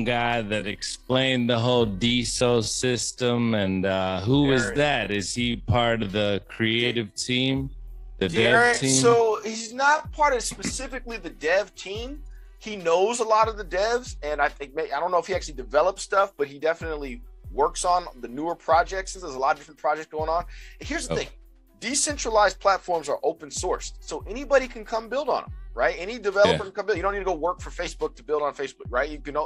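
From the start to about 10.0 s there's a time-stretched section: the audio plays at roughly 0.59 times its normal pace, so it drags while the pitch holds steady. That's likely software stretching it to fill a set length by repeating short pieces.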